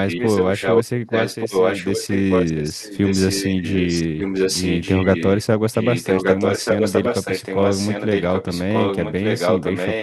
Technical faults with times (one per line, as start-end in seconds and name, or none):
0.08-0.84 echo leak
1.09-5.45 echo leak
5.72-10.03 echo leak